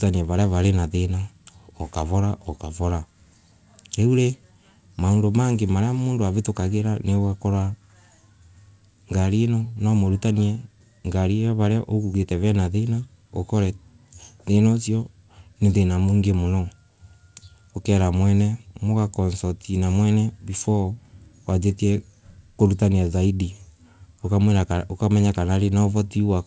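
Nothing stood out on listening to the speech, which comes through a call path whose audio stops at 8 kHz, consistent with a G.722 wideband codec.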